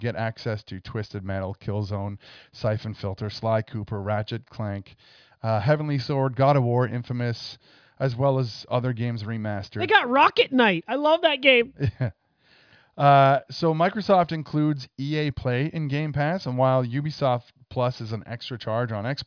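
No technical faults can be heard anywhere in this speech recording. There is nothing in the audio that calls for a time or a value to be noted.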